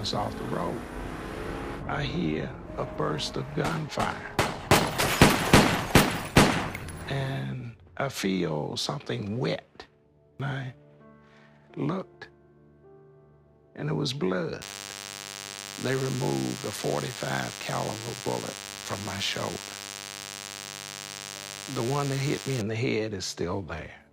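DECT cordless phone buzz runs from 14.61 to 22.61 s. A nearby DECT handset or base station sends a short radio burst every 10 ms, and the audio circuitry rectifies it. The result is a steady, thin 100 Hz buzz with many harmonics, roughly 10 dB below the sound.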